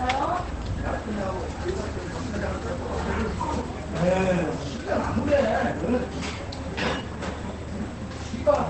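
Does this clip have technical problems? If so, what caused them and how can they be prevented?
Yes. Opus compression runs throughout: the sound is muffled and hoarse, with nothing above 8.2 kHz, likely from a low-rate Opus encoder falling back to its speech-oriented SILK mode, which fits a wideband stream near 12 kbps that heavily strips detail. Encoding at a higher bitrate, or forcing music mode, would prevent it.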